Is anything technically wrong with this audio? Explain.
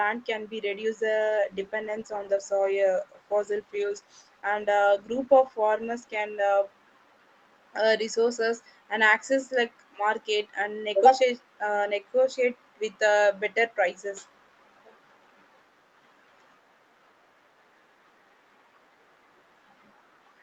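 Yes. From 1.29 s to 7.02 s, just after "can be reduce", there is a call bitrate drop. The call's bandwidth estimate fell, so the encoder was told to spend far fewer bits and coded the speech more coarsely. The sound points to a fall from around 64 kbps to roughly 23 kbps, held at that low rate for about 4.4 s. The speech turns audibly rougher and less detailed until the rate recovers. Faint room noise, about 51 dB below the speech, sits underneath.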